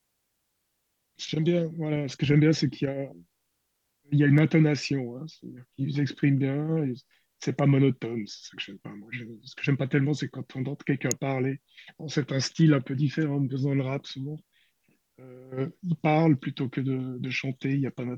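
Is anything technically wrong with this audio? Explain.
Yes. An electrical switching spike appears at 4.38 s and again at 11.11 s, each a sharp snap laid over the speech rather than part of it. The likely cause is a nearby switch, motor or static discharge arcing briefly, with the audio line picking up that burst of interference. The first snap peaks around -20 dBFS. The second is louder, nearer -10 dBFS.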